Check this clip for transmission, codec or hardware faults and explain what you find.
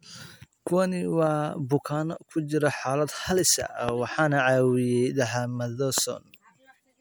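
Two loud pops occur in this speech. At 3.89 to 3.91 s and again at 5.98 to 6.00 s, a single sharp pop jumps well above the speech, which carries on underneath. Each is likely a brief voltage pulse from a switch, plug or static. On a waveform it shows as a tall, narrow spike, and on a spectrogram as a thin vertical line spanning all frequencies.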